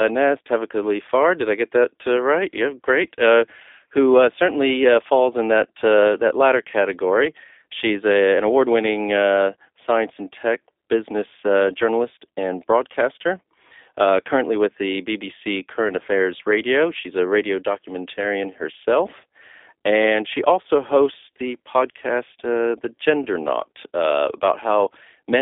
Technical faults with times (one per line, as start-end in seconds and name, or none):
0.00-25.41 G.729 codec